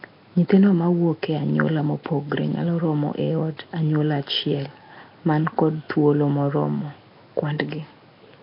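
Nellymoser compression runs through the whole speech clip: a rough, hissy halo and smeared, underwater texture, with nothing above 5.3 kHz. The likely cause is Flash's Nellymoser Asao codec, whose fixed two-bit blocks leave weak bands noise-filled, consistent with heavy coding near 22 kbps.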